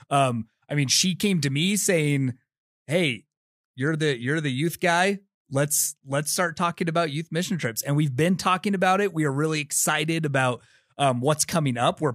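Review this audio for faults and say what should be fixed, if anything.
Nothing here needs fixing; this speech recording comes through without any faults to point to, so it can stay as it is.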